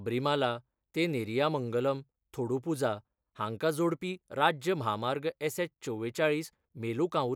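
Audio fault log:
No technical fault can be heard anywhere in this speech recording; the signal stays steady and intact across the whole clip.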